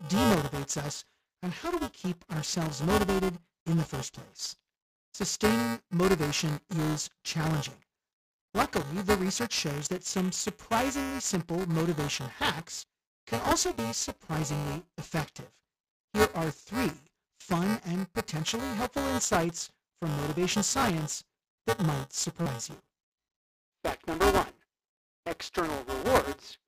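The playback ring buffer's writer and hardware reader have slipped out of step throughout, so a small slice of every period replays audio a few milliseconds stale. This buffer tearing produces a constant robotic buzz near 345 Hz, consistent with a 128-sample buffer, heard whenever speech is present. Headset packets are lost at 12.75 s (22.5 ms), 20.80 s (30 ms), 22.42 s (45 ms) and 25.93 s (60 ms spread over 90 ms, longest run 30 ms). In each case concealed Bluetooth headset packet loss stretches recent waveform into a short, held, buzzy tone that warbles slightly as real audio returns.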